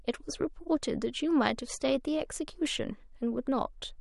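From 0.0 to 2.0 s the speech plays as an adaptive stream starting at a low bitrate. The player opened on a cheap encoding to start quickly, then switched up once it had gauged the connection. Those first two seconds sound dull and swirly, with smeared sibilants, which fits 48 kbit/s MP3. At 2.0 s the treble returns abruptly with no gap, consistent with a step to 128 kbit/s. On a spectrogram the upper band is missing or patchy until 2.0 s, then fills in along a sharp vertical edge. The waveform shows no break.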